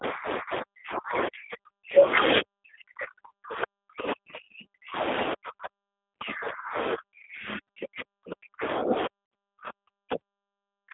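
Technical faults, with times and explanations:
Throughout: G.729 codec. The speech has been squeezed into an 8 kbit/s stream and rebuilt from a vocal tract filter, a pitch predictor and a few pulses per frame, so it sounds rough and slightly synthetic, with the plainly audible graininess of this model-based coding. The line passes roughly 300 Hz to 3.6 kHz. On a spectrogram everything above 3.6 kHz is empty, the harmonics look smeared, and faint room noise about 24 dB down is coloured by the codec.
0.00–2.01 s and 6.94–10.94 s: speech suppressed in double talk. Here the level falls away in pieces, dropping by roughly 40 dB at its deepest, for about one and a half seconds in the first stretch and nearly all of the last four seconds. The likely cause is an echo canceller that heard both sides at once and turned this talker down with the echo. On a waveform the envelope collapses to near-flat gaps, and on a spectrogram the upper band thins out.
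9.26–9.32 s: VoIP packet loss concealed by the speech codec. A 60 ms gap, which fits three 20 ms packets, is filled by the decoder continuing its last pitch and filter at falling gain. The result is a brief stretched sound fading out, and the voice stays weak for a moment after real audio returns. A spectrogram shows a frozen spectrum with no formant movement, and the waveform shows a repeating pattern shrinking in amplitude.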